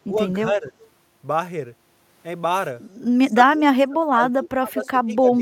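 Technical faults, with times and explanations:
0.05 to 0.18 s, 0.47 to 0.74 s and 3.31 s to the end: speech suppressed in double talk. The speech dips in level, by around 10 to 25 dB at worst, deepest in the final stretch. This likely happens when both sides talk at once and the echo canceller turns everything down.
0.80 to 0.88 s and 4.83 to 4.88 s: echo leak. Brief, faint copies of the speech arrive about 0.24 s late. The first sits far below the speech, and the second is around 20 dB down. This is likely residual loudspeaker pickup that the echo canceller failed to remove.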